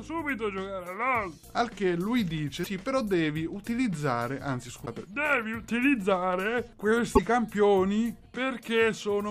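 At 2.63–2.67 s, 4.85–4.88 s and 7.15–7.19 s the sound skips ahead and 28 to 44 ms of garbled output follows, likely a broken MP3 bit reservoir: after frames of about 26.1 ms went missing, the next frames decoded borrowed data from the wrong frame.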